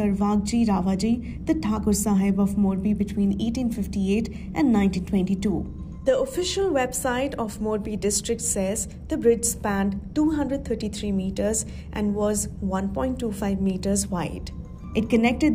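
No technical faults can be heard anywhere in the audio; the signal stays continuous and stable throughout.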